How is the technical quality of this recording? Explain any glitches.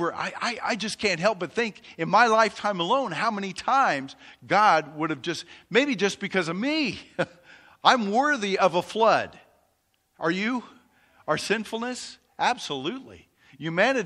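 The recording carries plainly audible codec damage from start to finish, most likely MP3 compression, at a level that fits a 64 kbps encode. MP3 divides the speech into narrow frequency bands and spends its limited bits where it expects them to be heard. At this rate the encoder chops off the upper treble and discards quieter bands, which flicker in and out between frames, giving the speech a watery, swirling texture, metallic chirping on s sounds, and softened consonant attacks.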